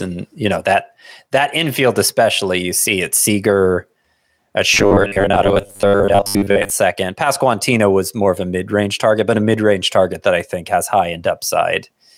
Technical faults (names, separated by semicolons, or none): robotic sound from repeated short buffers